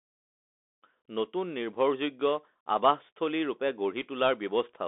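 From start to finish, the speech runs through a Bluetooth CVSD headset codec, sounding like a 64 kbps link. The band sits near 250 Hz to 3.6 kHz, and the codec adds granular hiss and scratchy s sounds that plain band-limiting wouldn't. The gentle fade-in ending at 0.85 s is smooth.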